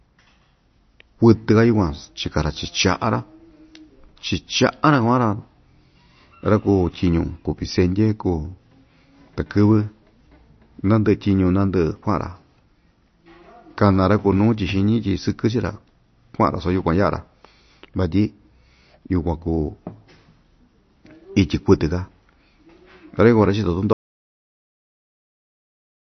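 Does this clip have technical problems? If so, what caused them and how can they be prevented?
Yes, there are two. Throughout the speech the top end stops dead at about 6.1 kHz, and the sound has a watery, swirly edge with chirpy sibilants. That's likely heavy MP3 compression, consistent with a starved bitrate of around 32 kbps, with the encoder trimming the treble and dropping weak frequency components frame by frame. Prevent it by encoding at a higher bitrate or keeping a lossless master.

At 23.93 s the audio drops out to silence and stays dead until the end. There's no room tone, just silence, so the input was likely lost, maybe from a disconnected device, a broken link or an accidental mute, while recording carried on. Prevent it by securing connections and watching input meters during the take.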